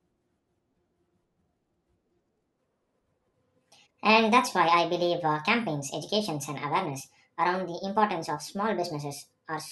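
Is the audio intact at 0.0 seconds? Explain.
Yes, the audio is intact at 0.0 seconds, with no fault at that moment.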